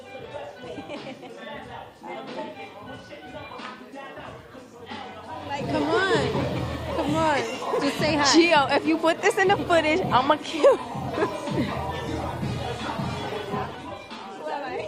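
At 11.97 s the quality drops suddenly, with no gap, and stays low to the end at 14.88 s. This is an adaptive stream at a lower bitrate. Codec artefacts rise. The sound points to a fall from about 64 kbit/s Opus to 16 kbit/s.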